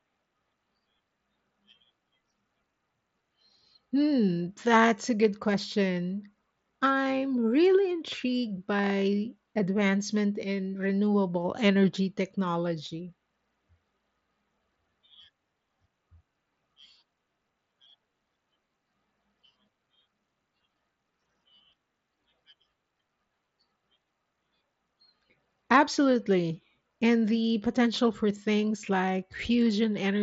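No faults found in this speech; the Bluetooth mSBC headset codec path works as designed, with audio band-limited at 8 kHz and the light codec graininess expected on louder passages.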